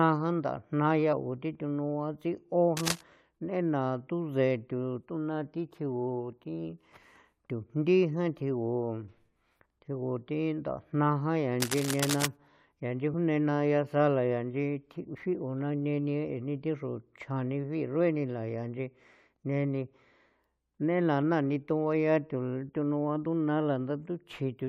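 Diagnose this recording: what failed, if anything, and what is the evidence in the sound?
At the codec stage, compressed frames were skipped: at 1.12 s the speech jumps ahead by roughly one 21.3 ms frame.

In the analogue wiring, a likely worn cable or connector shifted, causing cable scratch noise: dense, uneven rustling bursts at 2.77–3.01 s and 11.6–12.26 s, nearly as loud as the speech.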